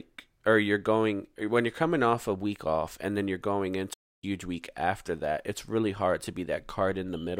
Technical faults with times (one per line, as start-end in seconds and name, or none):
3.93-4.24 playback stall